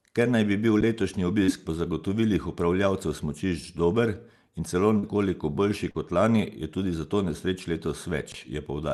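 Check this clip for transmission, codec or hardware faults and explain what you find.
Five faults are audible: two playback underruns, one burst of packet loss and two short concealed losses, all on speech carried over a call path whose top end stops near 12 kHz, consistent with Opus at about 40 kbps.

Underrun with held sample, at 0.81 s just after "naj bi bil", and at 8.32–8.34 s: the output buffer ran dry, so the converter held its last value for about 13 ms and then 20 ms. Playback then resumed where it had stopped, so each dropout is a brief flat silence with only a soft edge.

Burst of packet loss, at 1.43–1.51 s: a run of packets failed to arrive in time, and the receiver extended the preceding sound for about 45 ms while fading it down. The speech then jumps ahead, with roughly 40 ms of the original missing, leaving a short held buzz or hiss before the skip.

Short concealed packet loss, at 4.99–5.06 s between "smučišč dober in celo" and "boljši kot lani", and at 5.91–5.97 s just before "kot lani": about 40 ms of audio never reached the decoder. 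Concealment filled 42 ms and then 34 ms by continuing the prior sound and blending back into the real speech, which is heard as a quick smear or wobble.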